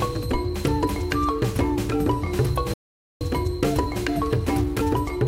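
A playback stall at 2.74 s cuts the sound off abruptly in mid-flow, leaving about 470 ms of complete silence until output resumes at 3.21 s. The gap is too long and too clean to be part of the material. It most likely comes from the player running dry of buffered data, or from its output thread being held up, so nothing reached the output until the flow was restored.

Time-compressed catch-up follows immediately, running from 3.21 s to the end. The player is working off the backlog left by the stall. It snips out small segments and cross-fades across each join, which plays the material at about 1.1 times normal speed without shifting its pitch. The result sounds slightly hurried.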